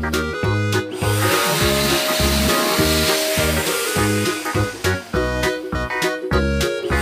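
Nothing here goes wrong at any point; the sound runs its whole course without a single glitch, dropout or odd artefact to point to.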